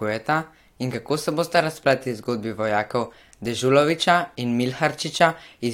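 No technical faults can be heard anywhere in this speech recording.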